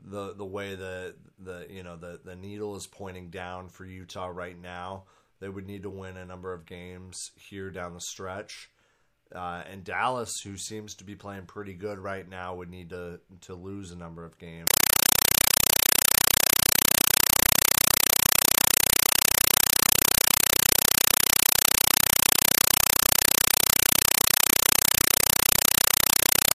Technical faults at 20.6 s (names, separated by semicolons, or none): compressed stream played as audio